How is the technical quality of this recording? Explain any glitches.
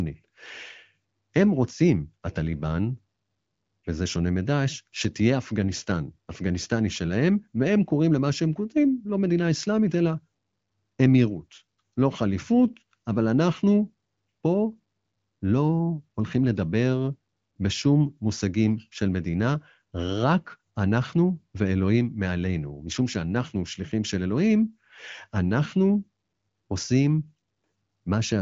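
No glitches to report here: the speech comes over an AMR wideband (HD Voice) link at 18.25 kbit/s, which is why there's nothing above 7.5 kHz, and at that rate any codec traces are faint at most.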